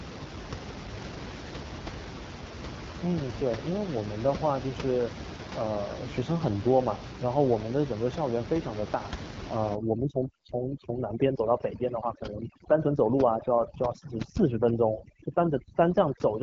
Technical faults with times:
0.00-16.43 AMR wideband (HD Voice) codec
9.75-16.43 overdone noise removal

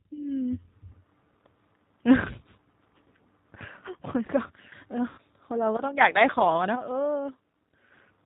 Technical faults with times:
0.00-8.25 G.729 codec
3.88-4.72 one channel drops out
5.09-5.19 VoIP packet loss concealed by the speech codec

